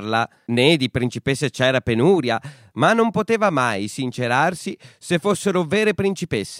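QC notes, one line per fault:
No faults found.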